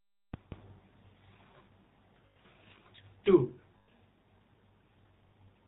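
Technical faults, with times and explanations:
Throughout, GSM full-rate codec: the vocal-tract model and sparse pulse excitation at 13 kbps strip everything above 4 kHz, leaving speech plainly buzzy and gravelly.
2.26 to 2.37 s, 3.78 to 3.89 s and 5.28 to 5.32 s, lost GSM frames: missing frames, about 100 ms, 100 ms and 40 ms, were filled by repeating the last good frame, giving a brief rough metallic ring.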